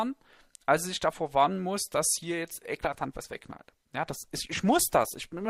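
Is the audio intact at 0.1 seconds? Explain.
Yes, at 0.1 seconds the audio is intact, with no dropout, click, distortion or other fault audible at that moment.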